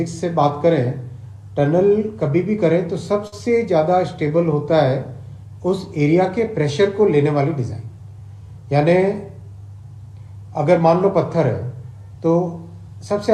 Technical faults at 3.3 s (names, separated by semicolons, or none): short stall from a late packet